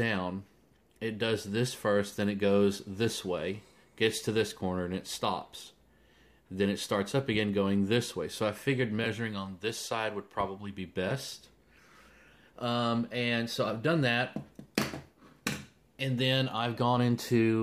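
Nothing stood out as a technical fault on listening to this recording.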